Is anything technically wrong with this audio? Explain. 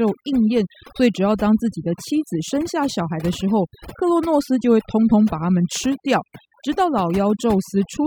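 Yes. Throughout the speech there is overdone noise removal. A noise reduction process was set far too aggressively for a noisy recording, so any frequency band that falls close to its noise estimate gets pulled sharply down or switched off, and the softer parts of the voice are caught along with the noise. The result is a background that drops and breaks up into twinkling specks.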